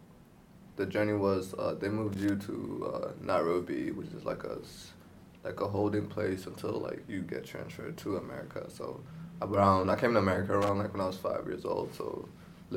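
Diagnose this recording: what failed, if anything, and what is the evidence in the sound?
Analogue wiring: loose connector crackle. Irregular scratchy bursts at 2.12–2.29 s and 10.62–10.69 s. A worn contact intermittently breaks, chopping the signal.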